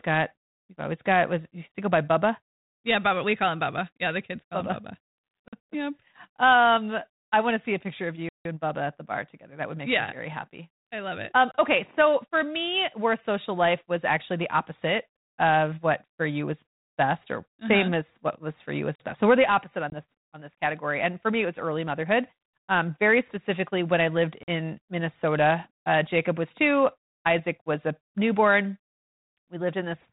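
Blocks of digital silence fall at 5.48 s (46 ms), 8.29 s (164 ms), 11.52 s (27 ms), 18.95 s (46 ms) and 24.43 s (46 ms). The audio drops straight to silence and back with no fade. The repeated 46 ms gaps fit a 2048-sample buffer that the program did not fill in time.

Packet loss on an ADPCM call appears at 19.90 s: a hard-edged 20 ms hole, about one packet's worth, in the G.726 stream at 32 kbit/s. After the gap the decoder's adaptive predictor and step size no longer match the sender's, so the speech returns slightly distorted.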